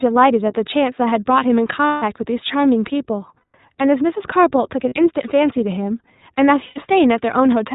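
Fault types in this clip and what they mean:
iLBC codec: a narrowband VoIP codec coding each 20 ms frame independently, here at 15.2 kbps. Nothing above 4 kHz survives, so the speech sounds band-limited, and the coding leaves a plainly audible rough, slightly synthetic texture across the whole clip.
Lost iLBC frames: missing packets filled by the decoder repeating the last pitch cycle with added noise. Gaps at 1.86–2.04 s, 3.38–3.56 s, 4.88–4.94 s and 6.66–6.79 s sound like brief held, buzzy vowels, with normal speech resuming straight after each.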